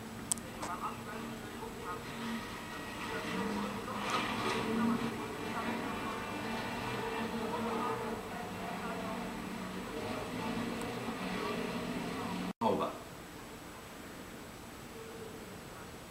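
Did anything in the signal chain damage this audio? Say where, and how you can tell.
Yes, and both problems come from a network link, either in transit or at the receiving end in the jitter buffer. At 0.43 to 0.45 s there is a skip ahead: playback jumps forward with nothing filled in, and roughly a second of material never plays, with the two sides butted almost directly together. A plain dropout would leave a silent or concealed gap at that point. Here there is no hole at all, only a seam where the continuity breaks. That points to a stretch of audio discarded while later audio was already queued.

From 0.53 to 3.23 s the jitter buffer speed-up follows. The sound runs at about 109% of normal speed, hurried but at unchanged pitch, as the receiver trims short pitch-period-sized slices again and again, removing around 300 ms in total to drain excess delay. A clock or sample-rate mismatch would also quicken the sound, but it would raise the pitch with it. 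The steady pitch here marks deliberate time compression.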